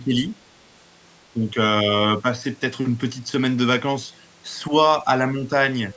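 The speech dips briefly five times: from 0.0 to 0.3 s and from 1.33 to 1.56 s it drops by around 10 dB, while shorter, shallower dips of around 5 dB come at 2.22 to 2.26 s, 4.69 to 4.73 s and 5.31 to 5.49 s. Each sounds like the talker being pushed back for a moment. This is likely speech suppressed in double talk, with the echo canceller turning the voice down while the far side also spoke, on call audio that carries nothing above 8 kHz.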